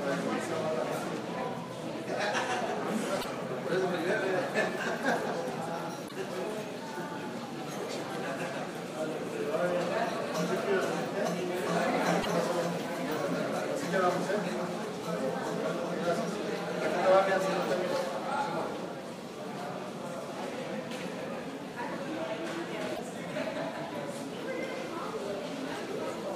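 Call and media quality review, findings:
Damaged data in the compressed stream: four short glitches, each about 70 ms, at 3.18, 6.05, 12.19 and 22.92 s. Probably the decoder hitting corrupted frames, misreading them and losing sync until the next good frame header turns up.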